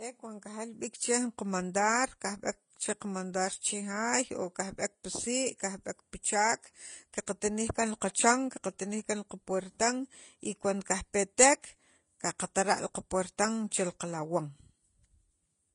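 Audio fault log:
Throughout, transcoding between lossy codecs: the speech was likely re-encoded from a low-bitrate HE-AAC stream into Vorbis, so two layers of codec artefacts sound together, and nothing remains above 10.5 kHz.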